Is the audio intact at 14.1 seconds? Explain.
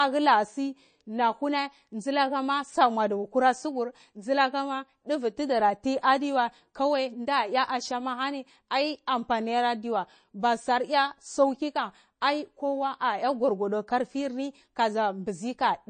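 No. MP3 compression affects 14.1 s and runs through the entire clip, so that moment is not intact. Nothing is heard above 9 kHz, and the speech has a plainly audible watery, swirling texture. The likely cause is an MP3 encoder starved of bits, consistent with a rate around 32 kbps: it cuts the treble at a fixed point and drops weaker frequency components, which flicker in and out from frame to frame, smearing consonant onsets and making sibilants chirp.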